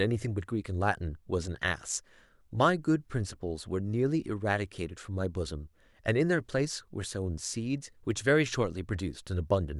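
At 8.11 s a single sharp snap sits on top of the speech, fairly quiet. It is an electrical switching spike, likely a nearby switch arcing into the audio line.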